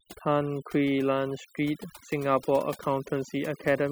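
From start to finish the speech carries overdone noise removal: a noise reduction stage set far too aggressively. The pauses drop to near silence sprinkled with twinkling specks, and quieter parts of the voice are cut along with the noise. Unlike a band-limited or low-bitrate codec sound, the damage follows loudness rather than frequency. Individual bands wink on and off wherever they sit near the estimated noise level, so the gaps hold sparkle instead of a steady dull floor.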